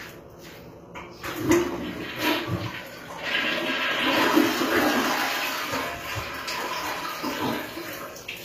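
From start to finish the treble has that gritty, metallic sheen, and nothing comes through above about 15.4 kHz. It's likely HE-AAC compression: the upper band is rebuilt from copied lower bands rather than coded, which fits a low bitrate around 24 kbps.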